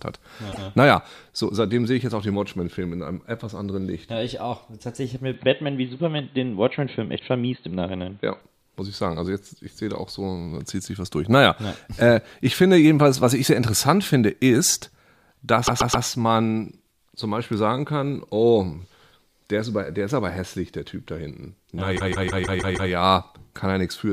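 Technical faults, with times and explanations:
0.51–0.64 s, 15.66–16.05 s and 21.96–22.90 s, repeated frames: a short stretch of audio replays. First a 130.6 ms block plays twice, then the same length plays four times (adding 0.39 s), then a 156.7 ms block plays seven times (adding 0.94 s). Each replay restarts mid-sound, which causes the stutter. A waveform shows identical copied segments side by side, and a spectrogram shows the same pattern tiled.
5.34–8.41 s, input switched to a poorer device: the sound turns dull and boxy, with no gap and about the same loudness, and a faint new noise floor roughly 45 dB down. The likely cause is a change to a narrower-band microphone. On a spectrogram, everything above 4.3 kHz is empty for that span.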